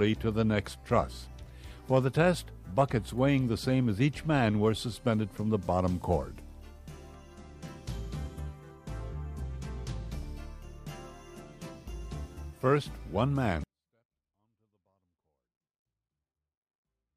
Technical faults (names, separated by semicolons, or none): 24-bit alignment error (too quiet)